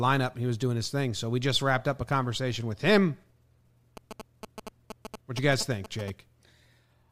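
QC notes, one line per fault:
3.97–6.10 s: GSM signalling bursts, a galloping dit-dit-dit of short buzzes at 217 Hz, about 10 dB below the speech, from a nearby 2G phone's radio bursts rectified by the audio circuit.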